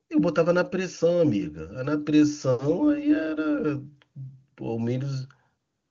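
No technical faults can be heard in this speech, which comes through the AMR wideband (HD Voice) codec at 23.85 kbit/s.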